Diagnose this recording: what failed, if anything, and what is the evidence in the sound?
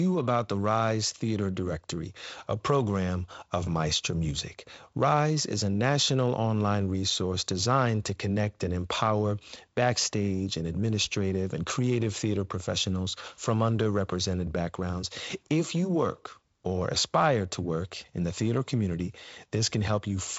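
Nothing in this recording failed.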